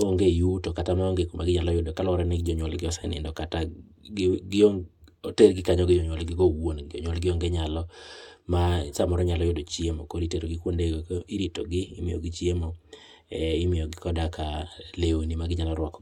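Listening to this speech recording, nothing technical stood out at any point.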